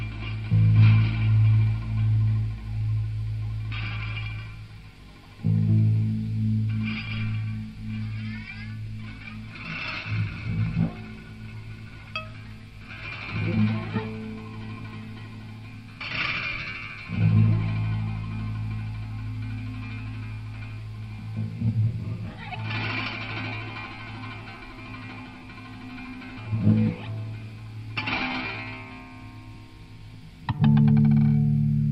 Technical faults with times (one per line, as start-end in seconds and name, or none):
none